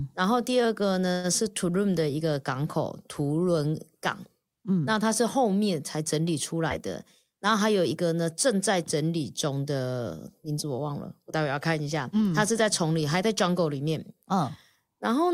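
From 1.11 to 1.27 s, a call audio freeze: the sound extends as a fading buzz for about 120 ms, then resumes intact, likely from delayed packets emptying the jitter buffer. At 6.70 to 6.73 s, a short concealed packet loss: 40 ms went missing, covered by a brief smear before the real audio returns.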